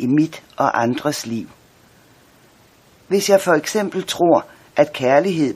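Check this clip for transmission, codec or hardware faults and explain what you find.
One transmission fault appears twice: an overlap between stream segments, at 3.71 s and 4.70 s. The two events sit about one second apart, matching a 1.0 s segment length. At each boundary, two segments claim the same time span. The player trims that overlap, and the sound was not truly duplicated. About 18 ms and then about 6 ms of audio go missing. The waveform jumps, giving a brief click or tiny skip.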